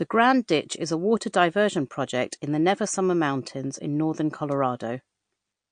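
The speech has a dull, watery quality throughout, with nothing audible above about 9.4 kHz and a swirling, metallic edge on sibilants. Likely cause: heavy MP3 compression, where the encoder, starved of bits at what sounds like a low bitrate near 48 kbps, cuts the treble and drops weak frequency components frame by frame.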